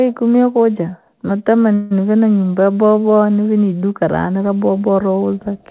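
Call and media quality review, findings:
Call audio freeze, 1.74–1.93 s: jitter buffer likely ran empty on delayed packets; receiver extended the last sound as a fading buzz or hiss for about 0.17 s, then resumed with nothing lost, delay shifted.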